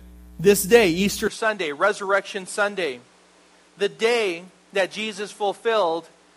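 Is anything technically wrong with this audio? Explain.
Yes. From 1.27 s to the end, the input likely switched to a poorer device. The recording continues through a narrower pickup that passes nothing above 11.4 kHz, so the sound abruptly turns duller, drops a few decibels and gains a faint new background noise, without any gap.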